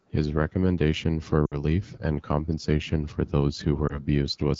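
The whole recording has passed through the AMR wideband (HD Voice) codec at a very low rate. The encoder models speech below 6.4 kHz as pulses driving a vocal-tract filter and fills 6.4 to 7 kHz with shaped noise. With so few bits, those pulses and filter settings are coarse. The result is a plainly rough, raspy texture that fits the 8.85 kbit/s mode, the second-lowest the codec offers.

From 1.46 to 1.62 s there are lost AMR speech frames. Radio errors corrupted about 60 ms of data, which fits three consecutive 20 ms frames. The decoder repeated the last good pitch and filter settings at falling gain, so the sound drops to near silence before recovering thin and rough. From 3.87 to 4.06 s a single frame, about 20 ms, was concealed the same way, leaving only a short dip or warble.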